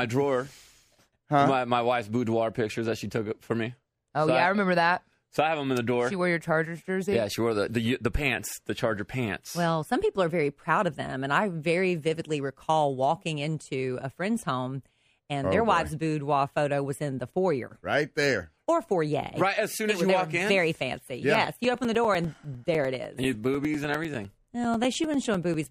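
Periodic USB or driver dropouts: from 21.35 to 25.64 s, the audio path stalls every 0.1 s, blanking about 4 ms each time, heard as a steady ten-per-second ticking.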